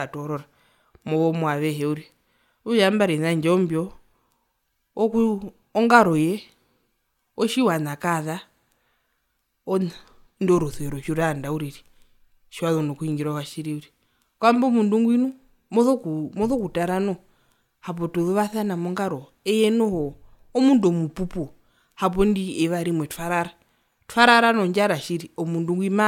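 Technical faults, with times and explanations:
No technical faults, with times or otherwise, are present in this speech clip.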